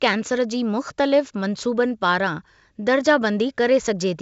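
No technical faults are audible.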